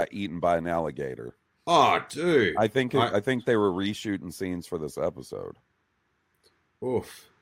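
Nothing in the recording stood out as a technical problem on listening.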